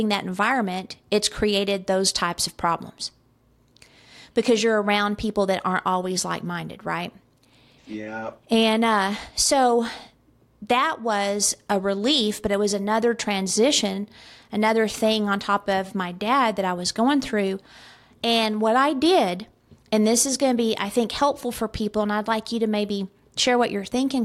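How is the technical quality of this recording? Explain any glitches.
No glitches or technical faults can be heard anywhere in the recording, and the signal holds steady throughout.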